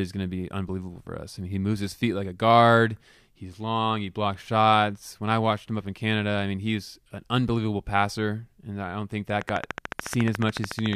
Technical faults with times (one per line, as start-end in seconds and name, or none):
9.41-10.94 train of clicks